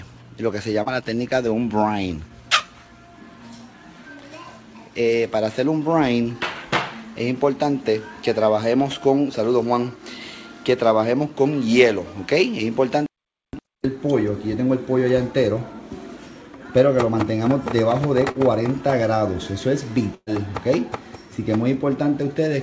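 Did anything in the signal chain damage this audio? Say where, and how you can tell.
Yes. Short concealed packet loss at 0.83 s and 18.32 s: about 30 ms never arrived, and the receiver extended the preceding sound before blending back, leaving a brief smear.

Burst of packet loss at 20.15 to 20.29 s, a network-stage fault: the last sound is held and fades over about 120 ms, including roughly 30 ms of silence, before audio resumes with a section missing.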